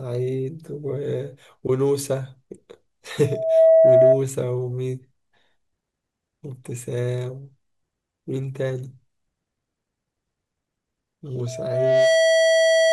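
At 3.21 to 4.23 s, and again from 11.46 s to the end, loudspeaker feedback squeal rings at 649 Hz. The speech loops from speaker to microphone, and that one frequency self-reinforces. Unlike a steady hum, it swells from nothing over a fraction of a second, then towers over the speech.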